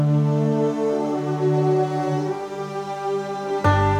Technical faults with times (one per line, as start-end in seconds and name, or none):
none